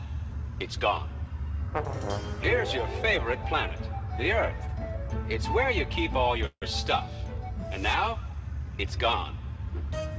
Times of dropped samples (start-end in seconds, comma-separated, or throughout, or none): 9.13